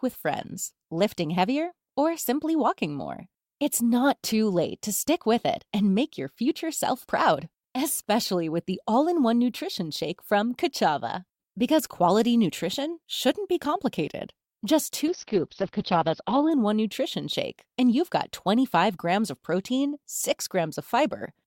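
At 15.11 s there's a call bitrate drop: the encoder gets starved and codes coarsely, and the top end collapses from about 20 kHz to 6 kHz, which fits a fall from around 128 to 8 kbps. It sits muffled and rough for about 1.4 s, recovering by 16.57 s.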